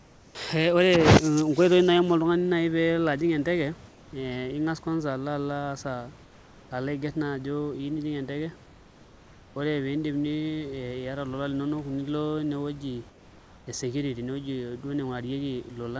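Comfort noise in place of the background appears in five pauses: 0.00–0.35 s, 3.89–4.13 s, 6.23–6.71 s, 8.66–9.56 s and 13.10–13.67 s. In each gap, the room's textured background, sitting about 26 to 29 dB below the loud speech, turns into a smooth, featureless hiss about 3 dB quieter (about 2 dB at 13.10 s). This is likely discontinuous transmission, where the receiver synthesises noise while the sender is silent. The band stops at 8 kHz.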